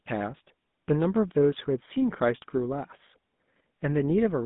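Speech runs through a GSM full-rate codec for the whole clip. The sound is buzzy and gravelly throughout, and the damage is plainly audible. The codec builds each voice from a vocal-tract model driven by a regular pulse train, and it keeps only a thinned excitation. That causes the rough, rasping texture. The band is narrow, roughly 150 Hz to 3.6 kHz, with nothing above 3.8 kHz. The coarse quality fits the 13 kbps full-rate mode.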